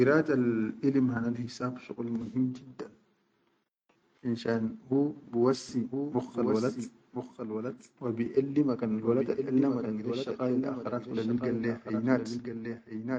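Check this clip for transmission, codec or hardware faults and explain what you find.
There's one problem, and it runs to the end. From 5.69 s, right after "finshan hu bi", there's a doubled audio track: a dry, full-band copy of the speech trails about a second behind, a bit quieter. It cuts in abruptly with no room tail, likely a second capture path or an edit stacking two offset copies.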